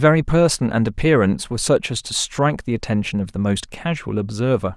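No technical faults can be heard anywhere in the speech.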